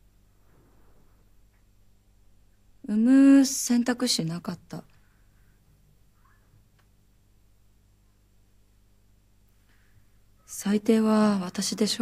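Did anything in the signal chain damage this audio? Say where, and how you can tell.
No, nothing along the chain has left an audible mark on this audio. None of the stages, from the wiring and converter through to storage and playback, shows any sign of trouble.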